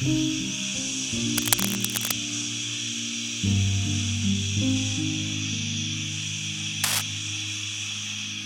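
From 1.38 to 2.15 s, cable scratch noise cuts in. Dense, uneven rustling sits over the sound, about as loud as it. A worn cable or connector being moved is the likely cause. A shorter burst returns from 6.84 to 7.02 s.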